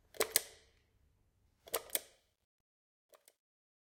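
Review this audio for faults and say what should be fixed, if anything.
The fade-out has truncation distortion from 1.6 s to the end, gritty and worst after 2.44 s, which fits a 12-bit stage without dither. Keep the fade at higher word length and dither on the final reduction.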